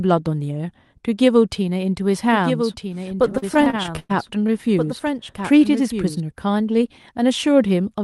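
From 2.22 to 6.20 s a doubled audio track, likely from the signal being captured twice, lays a dry, roughly 5 dB quieter copy about one and a half seconds behind the original speech, starting and stopping abruptly. Between 3.15 and 4.55 s, late-arriving packets repeatedly emptied the jitter buffer, causing repeated stalls (stutter): around twenty short stretches, the longest 103 ms, are held and extended, so the speech drags.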